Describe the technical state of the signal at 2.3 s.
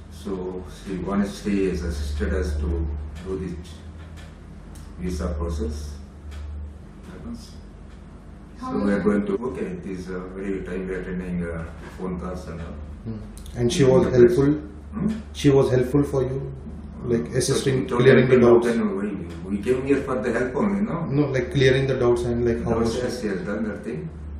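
Nothing audible at 2.3 s points to a technical fault; the signal is intact at that moment.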